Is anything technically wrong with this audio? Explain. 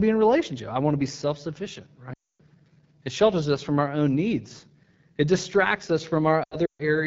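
Yes, two faults are audible.

Throughout, the AMR wideband (HD Voice) codec at 8.85 kbit/s makes the speech raspy and rough. A spectrogram shows noise-like texture above 6.4 kHz, not harmonics.

Lost AMR speech frames come right after "to be self sufficient", from 2.13 to 2.41 s. About 260 ms of audio is lost, which fits roughly 13 dropped 20 ms frames. The decoder repeats the last pitch with falling gain, so the sound smears and fades. The waveform tapers to near silence.

Lost frames come again after "needs it distracts us", from 6.44 to 6.83 s. They are scattered over 360 ms, and the longest gap is 140 ms. This gives a warbling dropout with brief fades, and the spectrogram shows blank patches.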